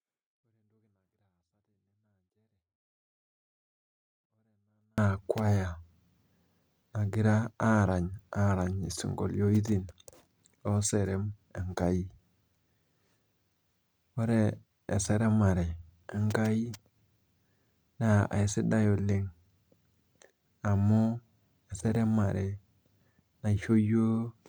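A speech clip whose first 4.98 seconds are almost inaudible yet clean, about 48 dB below the rest. That is a 24-bit alignment error (too quiet): 24-bit samples sitting in the low bytes of 32-bit words were read as full 32-bit integers.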